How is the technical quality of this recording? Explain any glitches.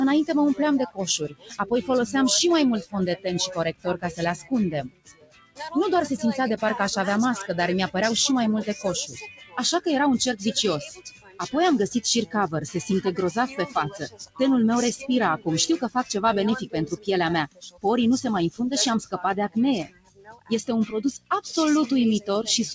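The quality is compromised by a speech noise suppressor acting on material it wasn't designed for. The sound comes through a call codec with nothing above 8 kHz, which fits G.722 at 64 kbps.

Noise suppressor applied to music or sounds, throughout: a processor tuned for speech treats steady tones, ambience and reverb tails as noise and pulls them down, while attacks pass. Level swings by roughly 15 dB, so the sound pumps and thins as sustained parts sink.

Sound cut by the noise suppressor, at 0.89–1.65, 2.82–5.6, 9.07–9.58, 10.88–11.4, 13.48–14.4, 16.64–17.08, 17.47–17.85 and 19.84–20.51 s: here the suppressor judged the sound to be noise and clamped harder, by about 12 to 20 dB. Held or decaying passages sink in level and tails cut short.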